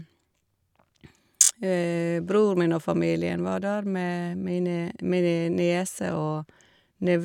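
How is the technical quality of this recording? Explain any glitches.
The recording has one glitch, a Bluetooth stutter from 1.44 to 1.51 s. Audio data went missing, the receiver replayed its last buffer, and the speech gives a short buzzy repeat. It then jumps ahead about 46 ms, which fits two lost frames.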